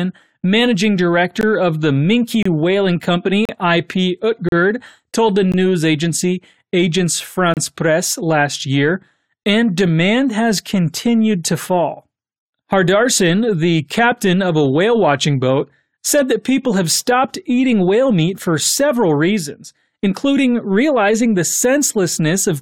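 Time stamps on consecutive one-second stream segments fail to meet, and the player fills each gap between stream segments with silence, leaving hard-edged holes of about 5 to 35 ms at 0.41, 1.41, 2.43–2.46, 3.45–3.49, 4.49–4.52, 5.52, 6.54 and 7.54–7.57 s.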